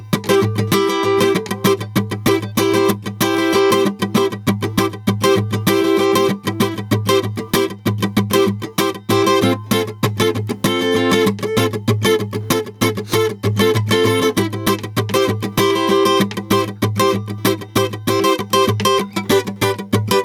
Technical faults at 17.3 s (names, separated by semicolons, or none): gain pumping